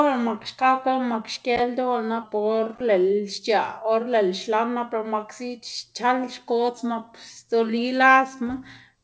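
Speech that twice sags audibly in pitch and pace, from 2.22 to 2.75 s and again from 6.78 to 7.30 s, dropping by about 112 cents (just over a semitone) while slowing by 6.3%, then snapping back to normal. These are most likely drift correction steps, where clock-matching software abruptly changed the playback rate to rebalance its buffer. The band-limited sound, with nothing above 8 kHz, comes from the call path's wideband codec.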